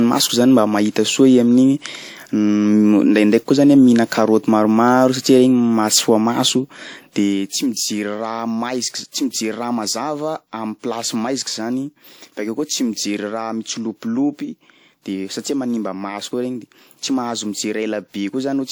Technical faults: transcoding between lossy codecs

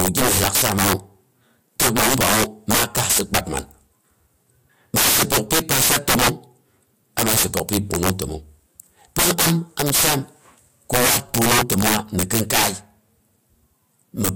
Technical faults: integer overflow

